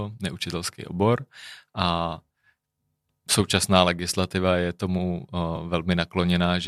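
At about 5.56 s there's a brief AAC frame loss with concealment: roughly 10 ms, which fits a single lost frame, goes missing and the decoder patches it from the previous spectrum, leaving a tiny smeared, phasey blip in the speech.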